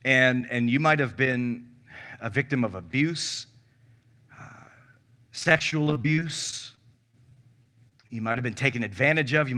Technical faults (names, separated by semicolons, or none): repeated packet loss (robotic sound)